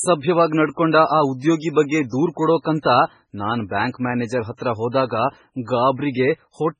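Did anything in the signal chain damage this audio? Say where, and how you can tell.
Yes, at the codec stage, throughout the speech. Nothing remains above 10.4 kHz, and the audio sounds heavily watery and swirly with smeared attacks, likely MP3 compression at a bitrate near 16 kbps. A plain low-pass filter would dull the treble without this warbling.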